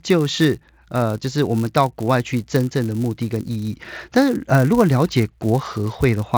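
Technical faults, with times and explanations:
Throughout, filter restarted on every block: there's a steady buzz at about 172 Hz riding on the speech, louder on strong passages and fading in the quiet gaps. A filter is dropping its memory at each block boundary and starting over from zero, so every block opens with a tiny transient. The 172 Hz rate fits 256-sample blocks at 44.1 kHz. The top end stops around 8 kHz, as you'd expect from an mSBC headset link.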